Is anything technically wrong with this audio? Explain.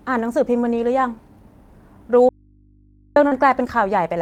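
Yes, there are three problems, all in the back half of this speech clip.

From 2.29 to 3.16 s there's an audio dropout to a faint residue: the speech cuts out abruptly for about 0.87 s, leaving only mains hum roughly 35 dB below the signal. That's likely the wanted feed dropping while the input after the break stayed live and picked up hum.

Right after, at 3.27 to 3.33 s, comes a short concealed packet loss. About 40 ms never arrived in time, so the decoder stretched the preceding sound for roughly 38 ms before blending back, which you hear as a brief smear or wobble.

Overlapping its tail, from 3.31 to 3.33 s, there's a lost packet rebuilt from error correction. Those 20 ms, which fits one lost packet, came from the low-bitrate copy carried in the next packet, so there's no gap, but that moment sounds rougher and noisier.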